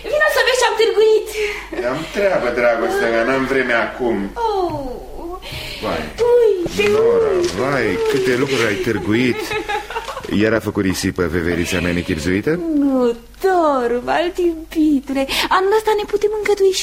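At 6.64 s, lasting until about 6.67 s, there is a burst of damaged data in a compressed stream. For roughly 34 ms the bytes reaching the decoder were corrupt or missing, so it could not parse the affected frames correctly, lost frame sync and had to hunt for the next valid header before normal decoding resumed. The result is a brief glitch, a chirp, squawk, click or short hole, that cuts across the sound.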